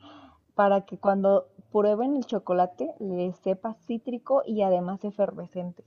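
No technical faults are audible.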